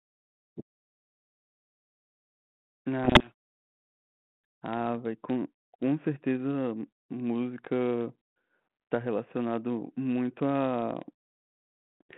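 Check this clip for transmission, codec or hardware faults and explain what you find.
One fault stands out, a short burst of harsh distortion in the speech. From 3.04 to 3.32 s the voice is swamped by a rasping, gritty distortion that sits on top of it, then clears abruptly. This is a codec payload misread: the G.726 code words arrive with their bit order reversed relative to what the decoder expects, so each ADPCM step is decoded as the wrong value and the reconstructed waveform wanders badly until the packing matches again. Elsewhere the 32 kbit/s G.726 path gives the narrow telephone band of roughly 150 Hz to 3.4 kHz.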